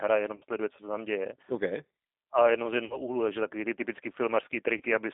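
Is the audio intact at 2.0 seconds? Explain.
No. At 2.0 s, as throughout, the speech sounds rough, synthetic and confined to 250 Hz to 3.6 kHz. This is G.729 codec damage, from speech resynthesized through a low-bitrate vocal-tract model.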